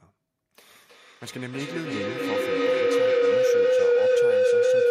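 A microphone-to-loudspeaker loop gaining level each pass causes feedback howl in this speech from 0.74 s to the end at 4.9 s, swelling near 500 Hz to about 15 dB above the speech and pulsing roughly every third of a second.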